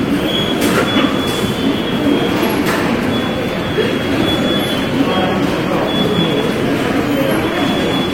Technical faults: none

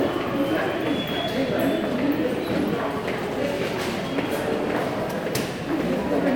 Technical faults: none

